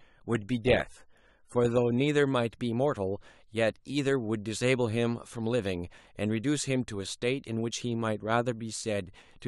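For the first 2.0 s the speech sounds dull and smeary, with the top end missing and codec artefacts stronger, then at 2.0 s it snaps cleaner with no gap. That's an adaptive stream starting at a low bitrate: the player began on a cheap version to get going fast, then stepped up once it had measured the connection. The early stretch fits roughly 27 kbit/s AAC, the later part something near 96 kbit/s.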